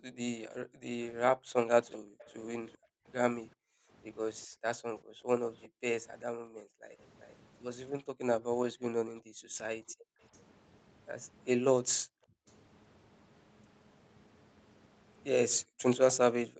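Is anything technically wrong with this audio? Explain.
Yes. Background gated by the echo canceller occurs from 0.0 to 6.98 s, 9.21 to 10.21 s, 11.9 to 12.46 s and 15.63 s to the end. While the far side's audio played out of the loudspeaker, the canceller suppressed the microphone hard, by about 40 dB at the deepest. The room sound dips or vanishes in stretches, about three seconds in total within the first window, and returns once the canceller releases.

Echo leak appears at 1.91 to 2.78 s, 5.56 to 7.36 s and briefly at 12.5 s. A delayed copy of the speech trails the original by 388 ms. It is about 20 dB below the speech in the first stretch and fainter later, around 30 to 35 dB down. The likely cause is a loudspeaker on one side whose echo canceller let part of the pickup through.

Over the whole clip the speech has passed through call-style microphone processing and an Opus call path, with the sound band-limited to 8 kHz at a bitrate around 32 kbps.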